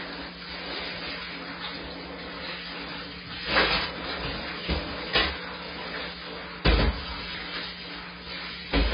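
From start to finish the sound carries heavy AAC compression damage, likely from AAC-LC at a very low bitrate, around 16 kbps. Nothing reaches above 5 kHz, so the top end is gone. The encoder drops and coarsely quantises spectral detail to fit its tiny budget, which leaves a dull, smeared texture. A plain low-pass filter would only darken the sound cleanly. Here the remaining bands themselves sound grainy and unstable.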